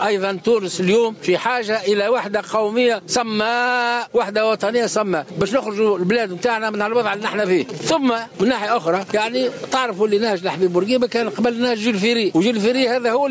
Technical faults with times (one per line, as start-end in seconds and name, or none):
0.00-13.30 gain pumping
7.13-9.11 GSM signalling bursts